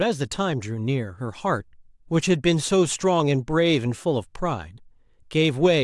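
A short recording of speech, with no technical fault to report. Nothing in it calls for a time, a cause or a fix.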